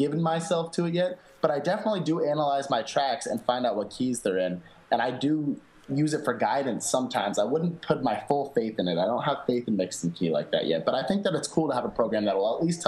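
No technical faults can be heard anywhere in the audio. It runs without any interruption, distortion or glitch.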